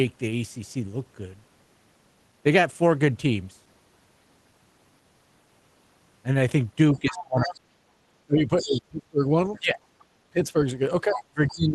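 Speech over a call link whose band stops near 12 kHz, consistent with a low-bitrate Opus stream. From 6.94 to 7.69 s and from 8.22 s to the end, the talker dips by around 30 and 25 dB. This is speech suppressed in double talk, likely the echo canceller ducking while a second voice plays, unlike packet loss, which has no second voice. That other side's voice leaks through at 6.97 to 7.55 s, 8.59 to 8.79 s, 9.47 to 10.04 s and 11.13 to 11.66 s, ranging from about 35 dB to about 10 dB under the speech. It is likely residual loudspeaker echo rather than a live second talker in the room, since it arrives only during those suppressed stretches.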